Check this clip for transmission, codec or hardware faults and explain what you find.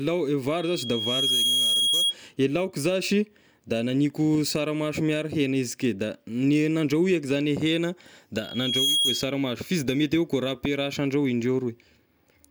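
The speech carries loudspeaker feedback squeal twice, from 0.57 to 2.15 s, just before "e laoka", and from 8.43 to 9.35 s, between "zagny hegna" and "fa izy da mety". A microphone is re-capturing its own loudspeaker, and at 3.3 kHz the loop gain tops one, so that tone swells within about a second until it sits a little above the speech. Unlike a steady interference whistle, it grows from nothing each time.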